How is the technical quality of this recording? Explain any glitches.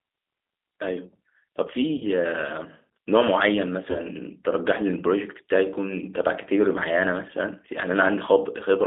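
The recording has narrowband low-bitrate telephony quality, with two brief dropouts.

Throughout, the G.729 codec shapes the sound. It rebuilds speech from a vocal tract filter, a pitch predictor and sparse pulses, which fits an 8 kbit/s G.729A coder. The band runs from 250 Hz to 3.7 kHz. The result is thin, rough and plainly synthetic.

At 1.98 to 2.04 s and 3.91 to 3.99 s, VoIP packet loss is concealed by the speech codec. About 30 ms of audio went missing each time, which fits a single lost packet. The decoder extended its last pitch and filter. The speech is stretched into a buzzy tone or coloured noise that fades, then recovers sluggishly.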